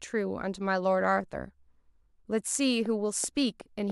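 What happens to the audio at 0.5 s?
Nothing goes wrong at 0.5 s: the speech there is intact, with no dropout, click, distortion or other fault.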